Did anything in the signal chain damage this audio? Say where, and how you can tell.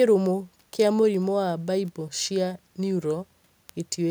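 Yes. Bit error spikes from storage or a digital link, at 1.15, 1.88 and 3.69 s, sound as sharp ticks in the speech. One flipped bit shifts a single sample by a power of two, leaving a lone one-sample needle on the waveform and a thin full-band vertical line on the spectrogram.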